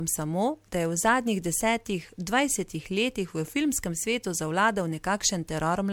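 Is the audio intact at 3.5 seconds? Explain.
No. At 3.5 seconds the speech carries generation loss, present across the whole clip: it sounds swirly, hollow and smeared, with consonant attacks blurred, more than a single 96 kbit/s MP3 pass would give. The likely cause is about four rounds of MP3 decoding and re-encoding, each quantising on a shifted frame grid so the errors stack. A spectrogram would show a hard ceiling near 19.8 kHz, patchy holes through the upper bands, and smudged onsets.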